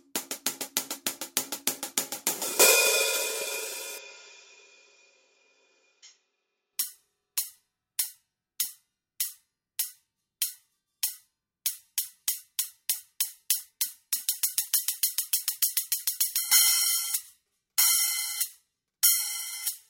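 From 3.98 to 6.73 s the audio abruptly turns duller and quieter, then clears again. In that stretch nothing is heard above 7.3 kHz, the level falls by about 10 dB, and a faint new background noise sits well below the signal. The changes happen with no gap at either edge. The likely cause is an input switched to a poorer device in mid-recording, one with a narrower band, its own tone and its own noise.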